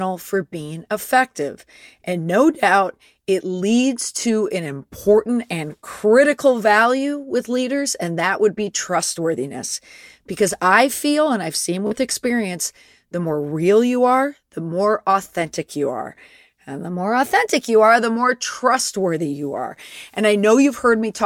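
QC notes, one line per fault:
4.66 to 5.17 s, drift correction step: right after "it leads to an", the speech slows about 6% and drops roughly a semitone (about 110 cents flat), then snaps back before "and critical value with". Likely a clock-sync stage changing playback rate in one jump to rebalance its buffer.
11.87 to 11.91 s, Bluetooth stutter: between "feel and I've seen" and "experience the more real" there's a quick stutter where the last slice of audio gets replayed over a gap of about 44 ms, which fits roughly three lost packets. The speech then resumes further along, as if it had kept playing.
16.88 to 17.99 s, drift correction step: just before "the more trustworthy you", playback runs about 6% fast and sits roughly a semitone sharp (about 103 cents) for just over a second, then drops back to normal. This is likely the rate correction in the opposite direction, draining the buffer.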